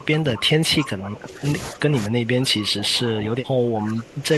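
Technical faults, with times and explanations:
0.0–1.45 s and 1.72–4.33 s, speech suppressed in double talk: in both stretches the speech sinks by as much as about 15 dB, with only a short recovery around 1.5 s. The likely cause is both ends talking at once: the echo canceller cannot separate the near talker from the loudspeaker echo, so it pulls down everything it hears. Unlike a noise gate or a network dropout, the speech is turned down across long spans while it continues, not cut at pauses.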